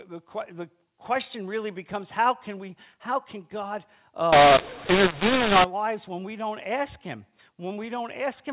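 From 4.33 to 5.64 s, just after "we how can god" and before "lives when we don't", the speech turns harsh and gritty, with levels jumping oddly and hiss in the gaps. This is mu-law and A-law mixed up: telephone audio coded as A-law G.711 was decoded as mu-law, scrambling sample levels.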